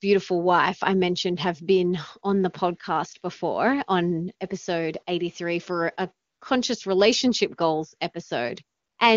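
At 6.27 s the real background drops out for about 140 ms and a smooth, even hiss stands in for it until 6.41 s, then again from 8.77 to 8.97 s for about 200 ms. That's AMR comfort noise: the sender decided nobody was talking, stopped sending speech frames, and the far end filled the gap with synthetic noise built from a rough sketch of level and spectrum. Around it the wideband speech sounds clean.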